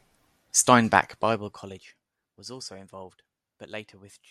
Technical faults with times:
0.95-1.99 zipper noise

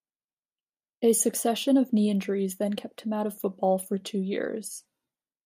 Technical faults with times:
none

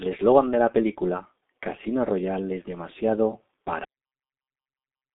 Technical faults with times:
0.00-5.14 G.723.1 codec
3.85-5.14 cut-off end

